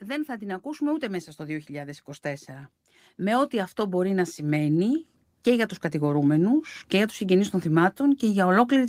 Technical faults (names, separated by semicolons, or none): automatic gain rising